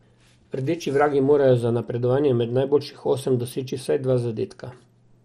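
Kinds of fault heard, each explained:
MP2 compression: The speech was likely squeezed through an MPEG Layer II encoder with too small a bit budget, at a level that fits roughly 64 kbps. The encoder divides the spectrum into 32 sub-bands and runs out of bits for the upper ones, so nothing survives above 14.4 kHz. The remaining bands are quantised coarsely and switch in and out, leaving the speech dull with a plainly audible gurgling, granular roughness throughout.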